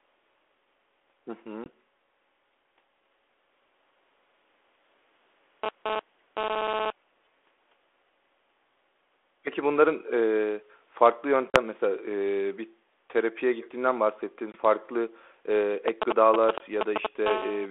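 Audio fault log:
1.64 s, 11.50 to 11.57 s, 14.52 to 14.56 s, 16.58 to 16.62 s: packet loss on an ADPCM call. Hard-edged silent gaps of 20 ms, 40 ms, 20 ms and 20 ms, consistent with one or two lost packets each. The speech returns slightly distorted because the decoder's predictor and step size have drifted from the sender's, then settles within tens of milliseconds.
5.64 to 6.90 s and 17.26 to 17.66 s: GSM phone buzz. A harsh, harmonic-rich buzz at 217 Hz, unrelated to the speech, from a nearby 2G handset whose radio bursts are rectified in the audio circuit. The first stretch, at about -4 dB relative to the speech, comes and goes as during a data transfer. The second, at about -7 dB, holds steady as during a call.
13.61 to 13.75 s: echo leak. A faint copy of the speech returns 344 ms late, very roughly 25 dB below it, as a short scrap. This is likely loudspeaker pickup at the far end that its echo canceller failed to remove and sent back down the line.
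15.88 to 17.07 s: GSM signalling bursts. A galloping dit-dit-dit of brief 217 Hz buzzes at roughly the level of the speech. This comes from a nearby 2G phone sending short groups of radio bursts, such as call or message setup, which the audio circuit rectifies into audible pulses.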